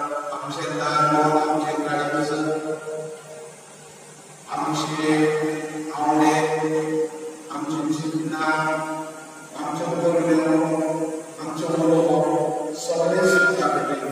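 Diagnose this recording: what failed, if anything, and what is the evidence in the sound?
Loudspeaker feedback squeal at the playback and microphone stage: from 13.04 to 13.59 s, a 1.4 kHz tone swells over roughly a third of a second to about 5 dB above the sound. The loudspeaker's output re-enters the microphone and the loop gain exceeds one at that frequency. On a spectrogram it appears as a single brightening horizontal line, and the waveform envelope grows steadily.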